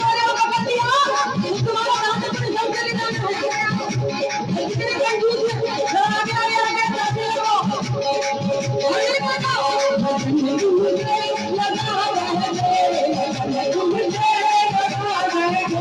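From start to finish there's a noise suppressor applied to music or sounds, a speech-tuned one left switched on. It treats the steady, sustained parts as noise and pulls them down by about 5 dB, so attacks get through while held tones and tails sag, giving a pumping, thinned-out feel.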